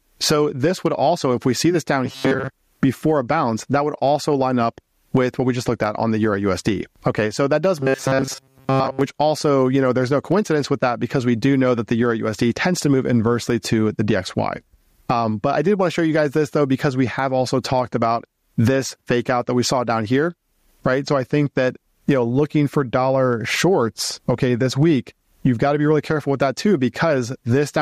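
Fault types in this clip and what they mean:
Gain pumping: the level rises and falls by roughly 20 dB across the clip, likely from gain set far too high with a fast limiter clamping each loud sound, so loud and soft parts end up closer in level; the waveform looks flattened.
Robotic sound from repeated short buffers: from 2.05 to 2.49 s and 7.80 to 9.01 s the audio turns into a rigid metallic buzz at 134 Hz, likely because a short stretch of about 7.5 ms is looped while most of the real audio is skipped; a spectrogram shows evenly spaced harmonic stripes.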